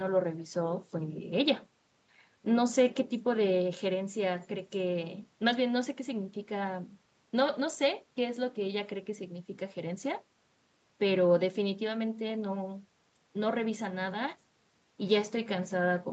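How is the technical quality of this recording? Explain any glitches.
No glitches to explain here: the speech comes through steadily with nothing going wrong along the way, just the usual call-style top end that stops around 8 kHz and a faint bit of room noise sitting about 42 dB under the speech.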